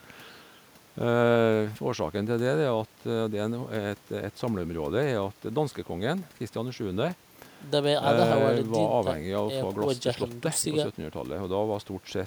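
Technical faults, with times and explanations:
No technical faults can be heard anywhere in this speech recording. There is nothing to list with a time or an explanation.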